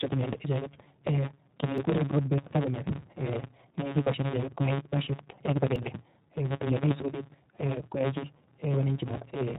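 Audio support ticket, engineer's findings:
Block size mismatch (truncated), whole clip. Steady buzz at 138 Hz, speech rushing about 1.6x fast with pitch roughly normal. One stage writes longer blocks than the next reads, so each block's tail gets dropped. The numbers fit a 512-sample write block.

iLBC codec, whole clip. Band-limited to 4 kHz, speech plainly rough and a bit synthetic. Each 20 ms frame's excitation is coded on its own, and the texture fits iLBC's 15.2 kbps mode. Decoder is doing its job; the damage is the codec itself.

Audio missing between chunks, at 1.78 s and 5.76 s. Short skips, each losing about 20 ms, butted together with no silence. The 4 s spacing points to chunked capture, likely losing a sliver at each handover between chunks.

Lost iLBC frames, 8.72 s. One 20 ms gap filled with a held, slightly buzzy vowel where the decoder repeated the last pitch cycle plus noise. 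Speech snaps back right after, since iLBC frames don't depend on earlier ones.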